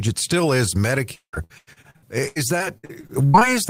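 Repeated packet loss runs from 1.15 s to 3.54 s: packets kept arriving late or not at all, and each hole was patched by stretching the last sound. About a third of that stretch is concealed, with gaps up to 174 ms, so the speech turns choppy and robotic.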